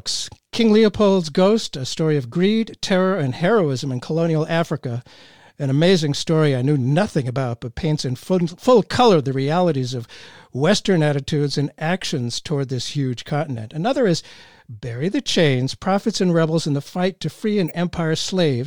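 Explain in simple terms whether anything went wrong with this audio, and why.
Three brief glitches cut into the speech: one from 13.27 to 13.30 s right after "actions toward this huge", one at 15.99 s, and a louder one from 17.68 to 17.72 s. Each is a corrupt frame decoded: damaged data played anyway, briefly scattering sound at wrong pitches.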